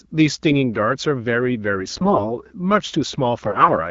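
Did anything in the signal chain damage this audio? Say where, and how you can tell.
Yes. These are AMR bit errors on the network link. From 1.80 to 2.26 s and from 3.45 to 3.73 s the speech turns hoarse, scratchy and gargly, while pitch and level hold. Flipped low-priority bits misplace excitation pulses and skew gain and spectrum values. The second burst is harsher.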